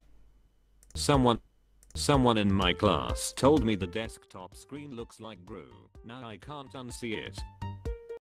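Stream segment repeated at 1.35 to 2.35 s: the player queued the same segment twice, so one second of audio plays again, with a small blip where it jumps back.

Zipper noise from 3.6 to 4.34 s: a fade of about 20 dB is applied in unsmoothed 1 dB steps, around fifty per second, each leaving a click that together make a ticking zip over the sound.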